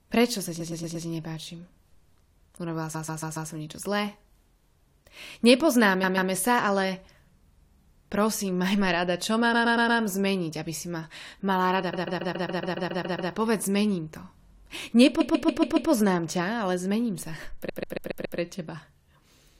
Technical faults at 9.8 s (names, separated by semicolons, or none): repeated frames